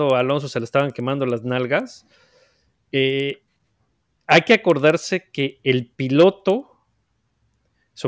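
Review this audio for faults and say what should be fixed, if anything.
Regular ticks at 10 Hz run through the whole speech clip, present only while speech is sounding, which points to a resampler restarted on every block. Each 100 ms block is converted in isolation, so the filter sees silence or wrapped samples at its edges, leaving a small error at every boundary. The behaviour fits a 44.1 kHz to 16 kHz conversion. To prevent it, keep one continuous resampler instance whose filter history carries over from block to block.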